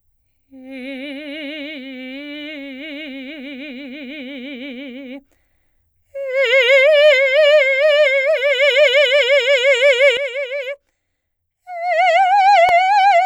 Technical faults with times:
10.17-13.26 sudden gain jump

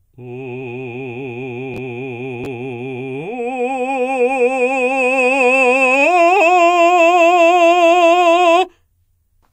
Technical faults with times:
1.74-1.78 chunks out of order
2.44-2.46 chunks out of order

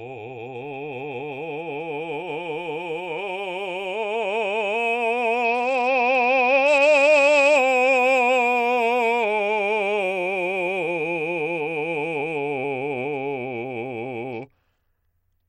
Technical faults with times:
5.44-7.56 Bluetooth SBC bit pool drop
14.32-15.49 Bluetooth SBC bit pool drop

